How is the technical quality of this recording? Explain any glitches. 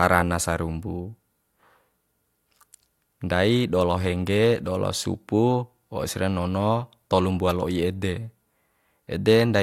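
No glitches or technical faults can be heard anywhere in the recording.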